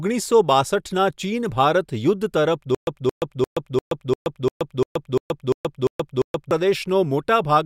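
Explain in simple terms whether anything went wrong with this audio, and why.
From 2.75 s to 6.51 s the speech gets stuck: the same short snippet, about 222 ms long, plays again and again, eleven times, each followed by roughly 125 ms of dead silence, so it ticks along at a steady beat of one repeat every 347 ms. This is a stutter with silent gaps. The likely cause is a player or stream that stalled, replaying its last fragment at each retry before running empty, so whatever should have been heard there is missing.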